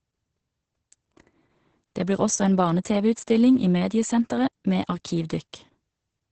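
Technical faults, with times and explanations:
Throughout: Opus voice compression, heavy. The speech sounds muffled and hoarse, with nothing above about 8.6 kHz, which points to the SILK coder running wideband at a low rate, likely around 10 kbps.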